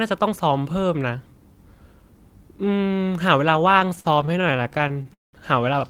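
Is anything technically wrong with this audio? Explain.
Yes, from 3.79 to 5.36 s there are repeated stalls (stutter). Packets arrived late, the buffer kept running dry, and over twenty stretched-out hiccups, up to 194 ms long, fill about a third of it.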